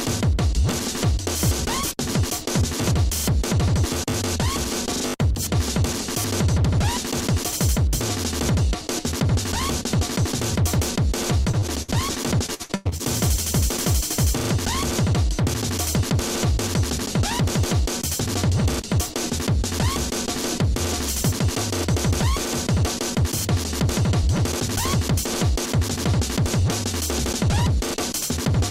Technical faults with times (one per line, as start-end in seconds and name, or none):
11.41-11.90 repeated packet loss (robotic sound)
12.46-13.01 repeated packet loss (robotic sound)